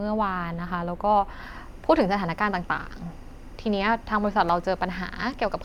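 From 1.44 s to the end, timecode bleed sits faintly under the speech, about 35 dB down: a steady chirping warble as leaked linear timecode flips between pitches near 1 and 2 kHz, fitting 23.976 fps code. A spectrogram shows constant bands at those frequencies.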